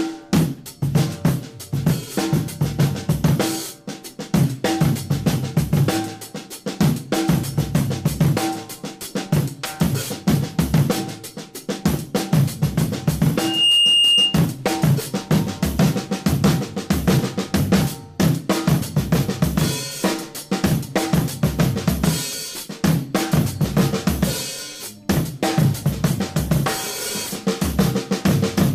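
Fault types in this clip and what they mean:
Loudspeaker feedback squeal: A microphone picks up its own loudspeaker, and one frequency keeps reinforcing itself round the loop. Here a 2.8 kHz tone swells over about a third of a second from 13.37 s. It ends at 14.43 s, roughly 5 dB above the sound.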